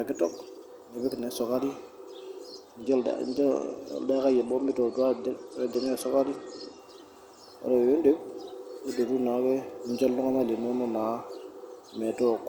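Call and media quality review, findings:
Bluetooth SBC bit pool drop, 2.83–6.79 s: speech dulls, gritty noise rises. Spectrogram shows treble band emptying, with grainy fill below. Link congestion starved the upper sub-bands and coarsened quantisation, which fits a bit pool cut from 31 to 12, near 88 kbps.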